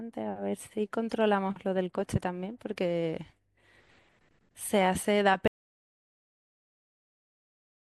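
Speech that cuts off abruptly at about 5.48 s and never returns: from there to the end the clip is dead, silence with no room tone at all. This audio dropout to silence likely comes from lost input, such as a disconnected device or mute, while recording continued.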